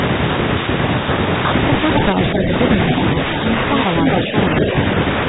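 Echo leak at 2.34 to 2.42 s and 4.06 to 4.2 s in this speech: a delayed copy of the voice returns about 270 ms late, about 5 dB under the speech the first time and as loud as it the second, likely from a loudspeaker echo the canceller missed. Speech suppressed in double talk at 2.35 to 2.52 s and 4.25 to 4.34 s: the talker dips by about 5 dB while both sides overlap, likely as the canceller turns down both its talker and the echo.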